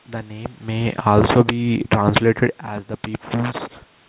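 Automatic gain falling begins at 0.92 s, just after "name may", and runs to 2.19 s. The gain control judged the incoming level too high and eased its gain down by about 4 dB over more than a second. The sound starts full and then settles lower, with the room noise sinking right along with it, a sign that the drop comes from the processing rather than from the talker.

Automatic gain rising overlaps it, from 1.43 s to 2.56 s. The input level fell by about 15 dB, and the gain control answered by lifting its gain about 7 dB over roughly a second. The sound and the room's background swell together, so the quieter stretch is partly made up, but not fully, since the correction is smaller than the drop. The talker's own shifts in distance near 0.5 s and 2.5 s are separate from this. The narrow band with nothing above 4 kHz fits the G.711 call path.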